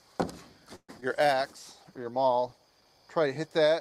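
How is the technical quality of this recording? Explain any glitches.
The recording has three network-related glitches packed into its first three seconds.

From 0.75 to 0.90 s the sound stalls into a fading buzz or hiss, then about 40 ms of silence. This is likely a call audio freeze, where delayed packets emptied the jitter buffer, inserting a gap of about 130 ms.

At 1.00 to 1.04 s there is a brief smear as about 40 ms of audio is lost. This is short concealed packet loss, covered by extrapolating the preceding sound, with the delay shrinking by roughly 30 ms.

From 1.42 to 2.93 s the audio turns rough and muffled. This is a call bitrate drop from 96 to 18 kbps, held at the lowest rate for 1.43 s.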